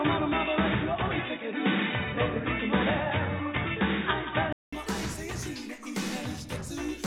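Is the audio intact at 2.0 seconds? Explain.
No. At 2.0 s the audio sits inside an input-switched-to-a-poorer-device span running from 0.0 to 4.73 s. Nothing reaches above 3.8 kHz, so the sound is dull and boxy, with a different tone, a level offset of around 5 dB and faint background noise well beneath the signal. That likely comes from recording through a narrower-band device such as a headset call profile. A gap of about 200 ms marks the change back to the fuller sound.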